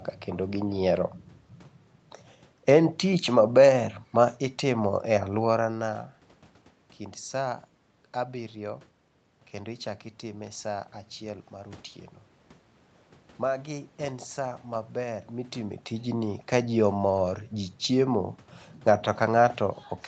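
Nothing here counts as a technical fault: the level shifts around 5 and 15 seconds come from the talker moving relative to the microphone, the background room noise belongs to the recording itself, and the top end stopping at 8 kHz is simply how this call's processing and Opus coding handle the sound.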